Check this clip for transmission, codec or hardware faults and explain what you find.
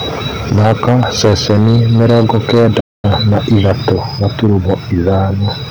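The speech has three kinds of fault: microphone overload, stepped-down microphone volume, and a playback stall.

Microphone overload runs from 0.51 to 3.95 s, about 11 dB over, with roughly a tenth of samples clipped. It returns from 4.23 to 5.43 s, about 4 dB over, more lightly. The likely cause is input gain set too high. Peaks flatten at the converter's limit, giving loud syllables a harsh, crackling edge.

Microphone volume steps down by about 2 dB at 0.59 s and again at 3.93 s. Each drop lands just after distorted peaks. This is likely call software reacting to clipping. Voice and background fall together in one sudden step.

A playback stall cuts the sound from 2.80 to 3.05 s, a 232 ms gap. The player likely ran short of data or was blocked. Output goes silent mid-flow, then resumes.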